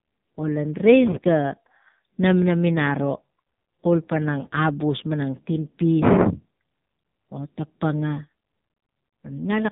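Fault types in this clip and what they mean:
AMR narrowband mobile codec: The speech sounds heavily buzzy and synthetic, with nothing above about 3.8 kHz. This phone-style codec rebuilds the voice from a vocal-tract model and sparse pulses, and this much damage points to a low mode near 5.9 kbps.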